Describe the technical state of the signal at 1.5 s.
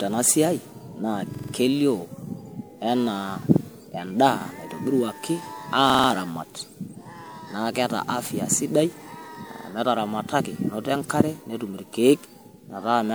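A repeated buffer runs from 1.35 to 1.53 s. New audio arrived late, so the same 46 ms slice, which fits a 2048-sample buffer, was played four extra times. It sounds as a rapid stutter with hard joins, and no audio is lost afterwards.

Generation loss is also present at this moment, as throughout. The sound is swirly, hollow and smeared, with blurred attacks. The likely cause is around seven successive MP3 passes, each quantising on a shifted frame grid, at a rate consistent with 128 kbit/s.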